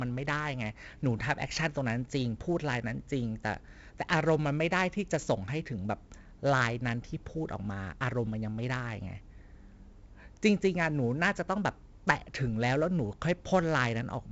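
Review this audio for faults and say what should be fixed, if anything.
4-bit ADPCM compression runs throughout the speech. Each sample is coded as a coarse 4-bit step from a prediction, so gritty hiss rides on louder syllables and attacks smear. The 64 kbps stream fits a 16 kHz rate, and nothing survives above 7.7 kHz. A spectrogram shows a hard ceiling at 7.7 kHz and a grainy noise floor that swells with each loud syllable. Keep a linear PCM master at full bandwidth and apply ADPCM only as a final delivery step, if at all.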